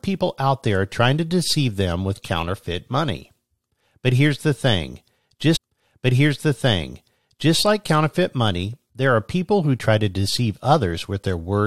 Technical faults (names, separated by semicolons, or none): stream segment repeated